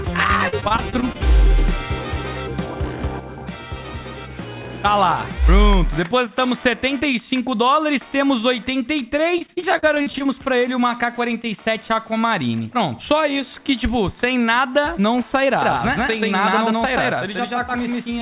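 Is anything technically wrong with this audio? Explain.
Yes. There are two kinds of fault, heard against a narrowband call sound with nothing above 4 kHz, which points to G.711 mu-law at 64 kbps.

Repeated packet loss (robotic sound) occurs from 0.48 to 1.16 s and again from 9.38 to 10.27 s. Audio packets kept arriving late or not at all. The receiver bridged each hole by extending the last stretch of sound, so about a quarter of each span is patched. The first span has seven gaps of up to 42 ms, and the second has ten gaps of up to 46 ms. The result is choppy audio with clipped-out fragments.

A doubled audio track starts abruptly at 15.62 s and runs to the end. A second, full-band copy of the same audio trails the original by around 150 ms at roughly equal level. It has no decay or room colouring, so it reads as a hard, flat slapback rather than an echo. The likely cause is the signal being captured a second time through a slower path, or an edit that left two misaligned copies stacked.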